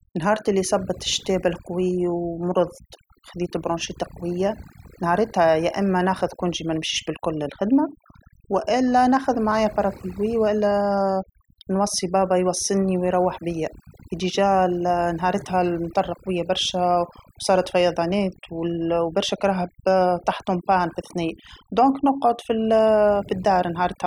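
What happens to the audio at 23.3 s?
At 23.3 s you're still hearing the overdone noise removal that runs through the whole clip. The reduction was pushed too hard, so bands near the noise floor get gated out along with quieter speech detail, leaving a background that drops away and breaks up into twinkly specks.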